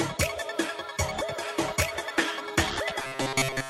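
From 2.99 to 3.70 s there is robotic sound from repeated short buffers. A rigid metallic buzz near 133 Hz replaces most of the audio, likely from looping one 7.5 ms chunk.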